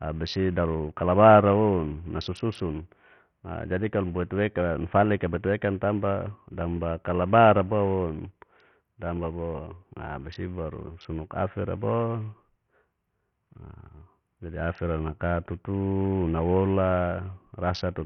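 From start to finish the speech carries heavy coding damage, likely from Bluetooth SBC compression at a very low rate, consistent with roughly 48 kbps. Starved of bits, the upper sub-bands flicker in and out, so sibilance turns patchy, and coarse quantisation leaves a gritty, aliased haze over the sound. On a spectrogram the treble appears as broken blocks and streaks, with nothing above 17.1 kHz; the waveform looks intact.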